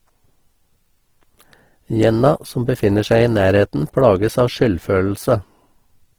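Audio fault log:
Throughout: Opus compression. The grainy texture points to a low-bitrate Opus stream, around 16 kbps, likely encoded in its music (CELT) mode. At that rate the encoder keeps each band's overall energy but fills much of the detail with folded copies of lower bands or with noise, so the speech turns rough, hissy and grainy rather than swirling. The damage is plainly audible, although the bandwidth stays full, reaching about 20.4 kHz.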